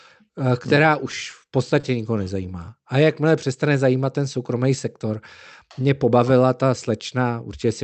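Speech carried over a WebRTC call path, with highs ending near 8 kHz. Two short stalls from a late packet occur, at 1.30 to 1.34 s and 1.80 to 1.85 s. Each time the jitter buffer ran dry, so the last sound was held for 20 ms and then 30 ms. Nothing is lost. From 5.79 to 6.19 s comes a jitter buffer speed-up. The receiver trimmed pitch-period pieces, about 40 ms in total, so the speech runs 8% fast at the same pitch and sounds hurried.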